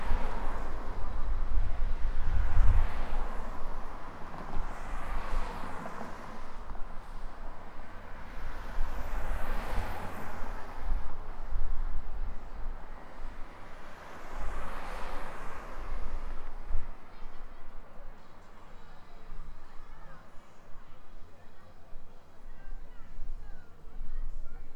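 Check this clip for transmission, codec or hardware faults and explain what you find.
Nothing here points to a transmission, codec or hardware problem; the clip is free of faults the whole way, with no trouble to report.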